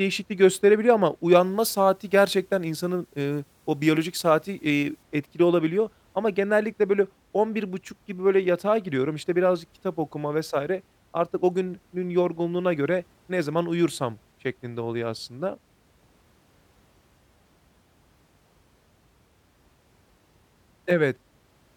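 From 1.43 to 5.03 s, after "gösterebiliyor ama", the speech has pre-emphasis left on. The CD 50/15 µs treble boost was never undone by its matching de-emphasis, so highs sit about 8 dB up at 10 kHz. That leaves the sound thin, bright and sibilant until "etkili olabiliyor".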